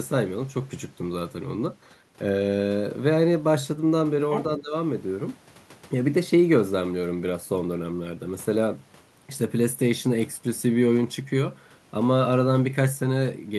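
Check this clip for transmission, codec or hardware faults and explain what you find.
Two short echo-canceller problems sit close together, just after the four-second mark.

From 4.31 to 4.43 s there's the other side's voice leaking through: a brief scrap of a second talker, roughly 10 dB below the main speech. The likely cause is the far end playing out of this device's loudspeaker and getting picked up by the mic, with the echo canceller failing to strip all of it before sending.

Then from 4.57 to 4.74 s comes speech suppressed in double talk. The talker's level sags by something like 15 dB, with around 150 ms affected in total, so the speech briefly sounds ducked. With both sides talking at once, the canceller likely couldn't tell the local voice from the loudspeaker echo and pushed everything down together.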